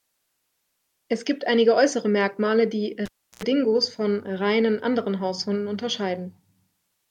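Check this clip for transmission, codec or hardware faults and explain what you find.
One hardware fault is present. From 3.05 to 3.44 s, a cable is pulled and plugged in. A pop opens 0.33 s of near silence. Then 85 ms of 60 Hz mains buzz sounds while only the plug tip touches. A second pop brings the speech back.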